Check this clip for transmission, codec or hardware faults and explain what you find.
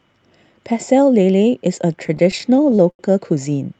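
One transmission fault appears, on a call path whose Opus coding stops the top end near 8 kHz. Repeated stalls (stutter) run from 1.93 to 3.01 s: sixteen jitter-buffer underruns, each concealed by stretching the last sound, up to 90 ms, about 22% of that span. The result is dragging, stuttering speech that shows as smeared, repeated spectrogram frames.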